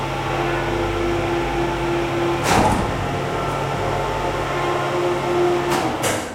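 No technical fault can be heard anywhere in this recording of sounds. Nothing in the audio calls for comment on the transmission or processing chain.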